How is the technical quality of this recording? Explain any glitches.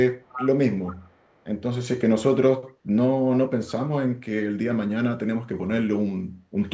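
The recording has audible echo leak near the start. Between 0.24 and 0.49 s, a delayed copy of the speech comes back about 0.4 s late. It is fairly loud, roughly 10 dB under the voice. From 0.84 to 1.44 s it returns, much fainter, around 25 dB down. The likely cause is a far-end loudspeaker whose echo canceller missed part of the sound, sending it back down the line. The band stops near 8 kHz, as expected for call audio.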